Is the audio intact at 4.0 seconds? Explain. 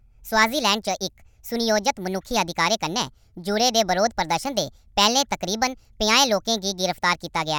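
No. At 4.0 s, as throughout, a wrong sample rate plays the speech 1.5 times too fast, fitting 32 kHz audio run at 48 kHz, raising pitch about 7 semitones; unlike a pitch shift, tempo and pitch rise together.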